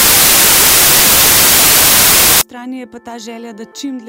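Samples built from the wrong bytes run from 0 to 2.41 s. Over this stretch the reader assembles each sample from its bytes incorrectly, whether offset by one byte, with the byte order swapped, or under a mismatched alignment. The rapidly fluctuating low-order bits end up as the most significant part of every value, so the sound is buried under loud, harsh broadband noise.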